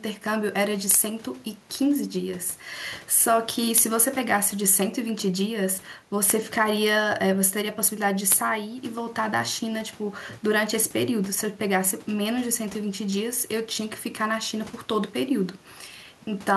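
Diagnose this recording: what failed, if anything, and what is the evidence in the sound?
Nothing failed in this recording, and the sound gives no evidence of any fault.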